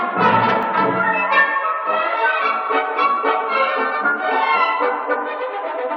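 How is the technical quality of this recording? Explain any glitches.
One glitch stands out. At 0.63 s, an overlap between stream segments makes about 5 ms of sound vanish as the player trims overlapping timestamps at a segment boundary. The waveform jumps, giving a tiny skip with no silent gap, unlike a dropout.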